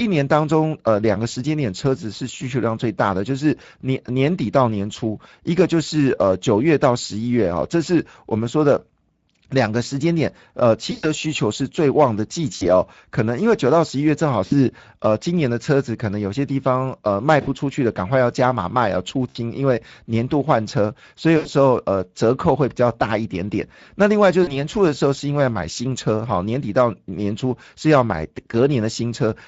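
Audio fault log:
throughout, Speex codec: the speech sounds hoarse and grainy because the CELP excitation is coarsely coded, which fits a mid Speex setting around 16.8 kbps. On a spectrogram, harmonics look smeared and noisy, and any content above 4 kHz is a diffuse noise-like wash.
10.91–11.05, 12.55–12.65, 14.45–14.54, 17.41–17.48, 19.29–19.37, 21.37–21.48, 24.43–24.66, VoIP packet loss concealed by the speech codec: speech is briefly stretched into a buzzy tone or coloured noise that fades. The decoder repeats its last pitch and filter across gaps of about 40 to 120 ms, the longest at 10.91. On a spectrogram these show as flat, frozen stretches, and the waveform shows a decaying envelope before normal speech returns.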